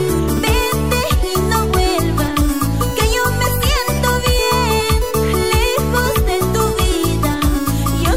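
No technical faults occur in the clip, so there is nothing to describe in time order.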